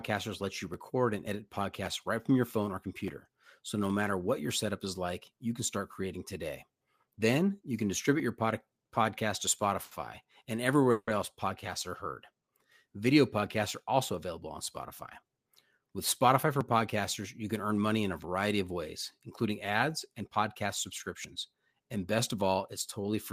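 At 9.83 to 9.94 s a short stall from a late packet holds one sound in the speech about 80 ms too long, with a slight buzz or dip. Unlike a dropout, nothing is lost. The jitter buffer ran dry and the receiver stretched the last sound until the packet turned up, so playback resumes at the same point, 80 ms later.

From 10.91 to 11.10 s comes a call audio freeze. The sound is continued as a buzz or hiss that fades, ending in about 50 ms of silence, 160 ms of fill in all, and then the speech carries on with nothing skipped. It differs from the brief stall by its length and its fade into silence. Packets were likely held up on the way.

A jitter buffer speed-up runs from 15.22 to 15.86 s and again from 21.73 to 22.49 s. The speech plays about 7% fast with no change of pitch, so it sounds hurried rather than held. Removing many tiny pitch-period pieces took out about a twentieth of a second, then about 70 ms, to shrink built-up delay.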